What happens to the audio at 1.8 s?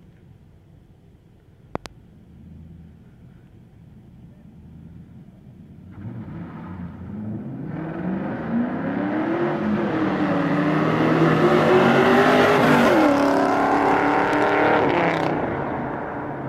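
A loud pop, in fact two in quick succession, lands between 1.75 and 1.88 s, peaking about 15 dB above the surrounding audio while the sound continues underneath. The likely cause is a sudden voltage step or pulse entering the signal chain, such as a plug being seated, a switch contact, a static discharge or a driver glitch. The following circuitry shapes that pulse into the sharp double thump heard here.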